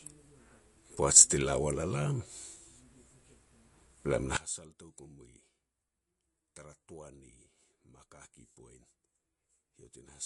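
Speech that sounds watery and swirly throughout, with smeared consonant attacks and nothing above 11.2 kHz, plainly damaged by MP3 compression. The likely cause is an encoder starved of bits, which fits a low bitrate of around 48 kbps, cutting the treble and letting weak frequency lines flicker between frames. From 4.37 s to the end the sound collapses to a faint remnant, about 21 dB quieter, likely because one channel is inverted in polarity, so the shared centre content cancels when the channels are summed to mono.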